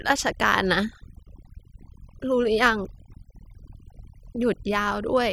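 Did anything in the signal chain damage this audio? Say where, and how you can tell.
Yes. The damage comes from overdone noise removal in the processing stage, and it runs through the whole clip. Between phrases the background drops to near silence with small twinkling specks. The suppressor was set too aggressively: it pulls individual frequency bands down hard whenever their level sits close to its noise estimate, so the quieter parts of the speech are cut away along with the noise.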